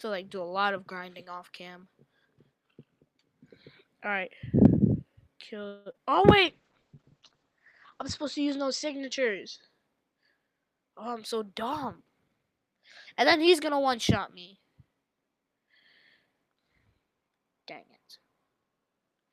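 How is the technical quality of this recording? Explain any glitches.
The recording has four kinds of network-related glitches, clustered around 6 s with a later one near 16 s.

Call audio freeze, 5.67 to 5.88 s: the sound stalls into a fading buzz for about 0.18 s, then resumes where it stopped, with nothing lost. This is likely late packets draining the jitter buffer. On a spectrogram, the last spectrum smears sideways and decays.

Short concealed packet loss, 5.92 to 6.10 s and again 5.98 to 6.01 s: roughly 20 ms of audio failed to arrive twice, and each hole was patched by extrapolating the preceding sound. You hear a brief smear or wobble. The waveform shows a slightly too-regular stretch that blends back in.

Call bitrate drop, 6.44 to 9.76 s: the encoder was pushed from 48 to 9 kbps, bottoming out for about 1.7 s. Bandwidth shrank from 20 kHz to 8 kHz. The sound turns muffled and watery, and the spectrogram shows everything above 8 kHz sharply cut away.

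Jitter buffer speed-up, 16.23 to 17.46 s: excess buffered audio was trimmed by snipping out short pitch-period pieces, about 0.15 s in total. This plays the passage at 113% speed with unchanged pitch, so it sounds hurried. The waveform events sit visibly closer together.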